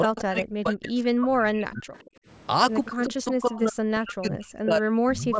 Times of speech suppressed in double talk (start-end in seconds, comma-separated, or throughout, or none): 0.06-1.89, 2.86-5.39